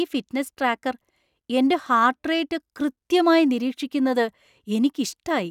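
Nothing stood out on listening to the speech here as a technical fault at any point.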